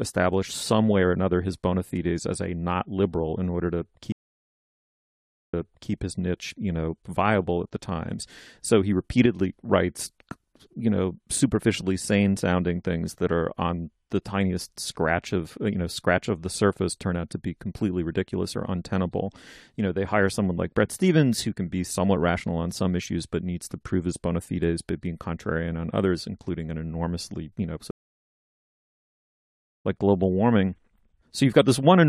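A speech recording with two stream reconnect faults and one brief level dip. At 4.12 s, after "liberal in order to", the audio drops to 1.4 s of silence, then a fresh decoder picks up about 0.4 s earlier than where it broke off, so a short stretch repeats before "his niche you know". At 27.91 s, after "an enormously you know", a 1.93 s silence follows and playback resumes at 29.84 s roughly two seconds later in the stream, skipping material before "like global warming". On a waveform both show as flat gaps with the envelope fading back in, and a spectrogram shows a blank vertical band across all frequencies. Between 9.26 and 9.39 s the level falls by about 6 dB, a short step down in the waveform envelope and a uniform darkening across the spectrogram, most likely because one channel dropped out and the mono sum lost half its common signal.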